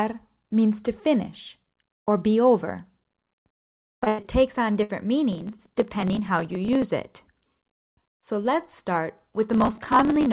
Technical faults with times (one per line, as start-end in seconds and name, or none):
3.52-4.26 repeated packet loss (robotic sound)
4.73-4.77 short concealed packet loss
4.83-4.91 burst of packet loss
5.33-6.83 processor overload crackle
9.53-10.26 processor overload crackle